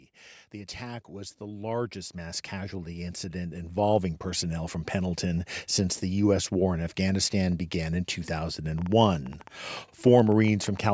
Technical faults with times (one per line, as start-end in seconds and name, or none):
0.51-5.25 automatic gain rising
8.78-10.90 train of clicks